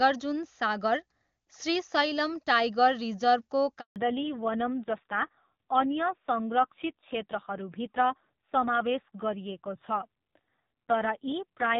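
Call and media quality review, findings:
Handover gap at 3.80 s, about 160 ms of dead air until 3.96 s. Audio drops out fast and sits silent until the new link picks up. Probable component: radio handover. No speech frames made it across during the network switch, so whatever was said there is gone for good.

Fallback to narrowband from 3.96 s to the end. Everything above 4 kHz disappears and never returns, so the speech goes dull and rough. Before the gap it's clean HD Voice wideband. Probable component: codec renegotiation. The call dropped from AMR-WB to AMR-NB, and the raspiness points to one of the low narrowband rates, around 5.9 kbit/s.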